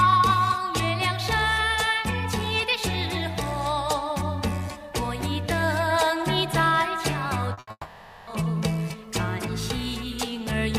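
At 7.53 s, a short concealed packet loss lasting about 40 ms: that slice of the stream never arrived in time, so the decoder extrapolated from the preceding sound and crossfaded back. It comes across as a brief smear or wobble. On a spectrogram the harmonic or noise pattern from just before 7.53 s is stretched flat for 40 ms. The waveform keeps its envelope but loses any real change in shape.

A burst of packet loss follows directly at 7.59 s and runs to 7.69 s, with about 80 ms of sound missing. The receiver repeated the last sound and attenuated it as the gap went on, so there is a short held buzz or hiss that fades before the audio picks up again further along. On a spectrogram this is a frozen, darkening band. The waveform shows a repetitive, steadily shrinking cycle.

From 7.71 s to 8.29 s, roughly 0.56 s of sound is gone, most likely a long network dropout. About 560 ms is filled by a synthetic continuation that decays into near-silence, with about 40 ms of true silence. 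When the audio returns at 8.29 s, the intervening material is simply absent. A spectrogram shows a smeared, fading patch ending in a blank gap. The waveform tapers to nearly flat before resuming abruptly.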